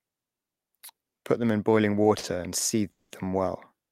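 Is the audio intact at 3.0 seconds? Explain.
No. From 2.91 to 3.12 s there is a call audio freeze, likely caused by packets stalling in transit so the receiver's jitter buffer ran empty. With no fresh audio, the receiver stretched the last sound into a fading buzz or hiss, about 190 ms of filler ending in roughly 80 ms of silence. When the packets arrived, playback resumed where it had stopped, so nothing is lost, but everything after runs about 190 ms later.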